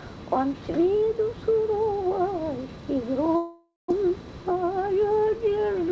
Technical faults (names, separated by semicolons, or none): long network dropout